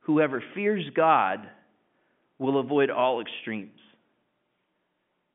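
The speech comes through a G.711 A-law telephone path at 64 kbps, confined to a line band of roughly 150 Hz to 3.5 kHz with nothing above 3.7 kHz, and no technical fault can be heard at any point.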